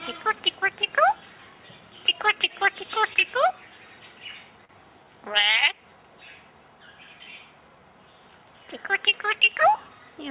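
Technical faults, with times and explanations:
3.13 to 3.19 s and 4.65 to 4.72 s, short stall from a late packet: twice a packet arrived after it was due and the jitter buffer ran dry, so the receiver held the last sound for about 21 ms, then 42 ms, before resuming where it left off. Unlike a lost-packet gap, no sound is skipped. Each held moment just lingers with a faint buzzy smear, and everything after it lands that much later, over the G.711 call path's usual 4 kHz ceiling.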